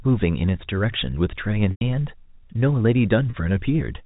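At 1.71 s the speech breaks up for about 100 ms as packets are lost. Instead of silence, the receiver loops the last pitch period, so a held, buzzy tone fades out over about 50 ms before the gap and then cross-fades back into the speech. At 3.30 s a shorter, 30 ms loss produces only a brief hold. On a spectrogram each repair shows as flat, evenly spaced harmonics. The waveform repeats identical cycles, which fits 10 ms packets being dropped. All of this sits within narrowband G.711 telephone audio.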